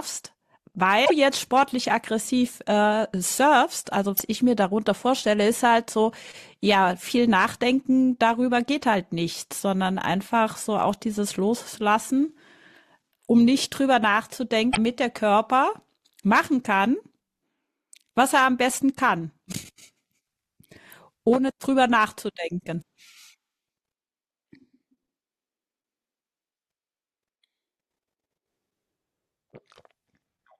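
At 1.02 to 1.11 s, 4.14 to 4.21 s and 14.70 to 14.78 s, damaged data in a compressed stream makes the decoder misread frames and resynchronise, giving brief glitches in the speech; spectrograms show short, garbled broadband blocks breaking the normal harmonic pattern.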